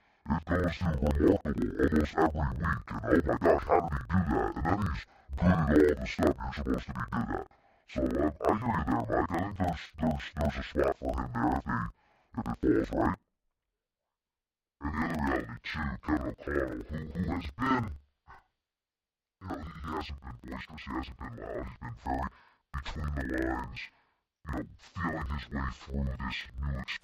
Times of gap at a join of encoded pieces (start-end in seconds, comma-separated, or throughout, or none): none